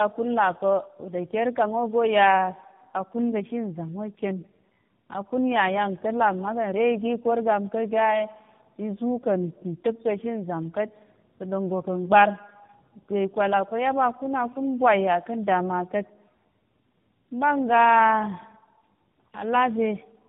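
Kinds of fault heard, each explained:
Tandem speech coding: speech went through two low-rate codecs in a row, ending in AMR-NB, so it sounds rough, muffled and warbly, with nothing above 3.6 kHz.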